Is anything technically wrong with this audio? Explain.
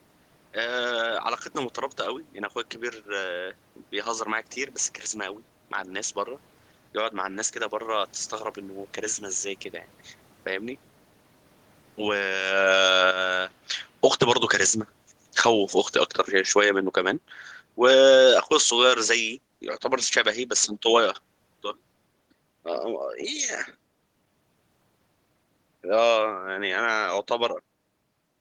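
Yes, there's one: automatic gain falling from 12.01 to 21.24 s. The gain control decided the level was too hot or the background noise too strong and eased down by about 12 dB, so the speech and the room noise sink together. The talker shifting position around 12.5 s is just natural movement.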